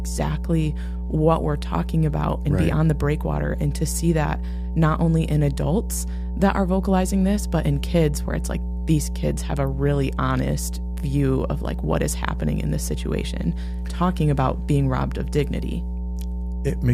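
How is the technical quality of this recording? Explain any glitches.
The technical quality is poor. Throughout the speech, a loud, steady 60 Hz mains hum sits only a little below the voice level, likely from a ground loop or nearby transformer leaking power-line current into the signal.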